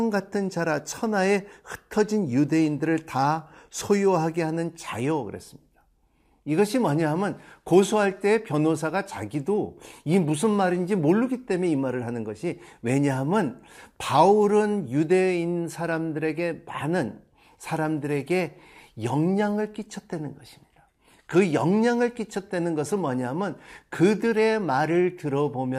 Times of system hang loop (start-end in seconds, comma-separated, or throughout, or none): none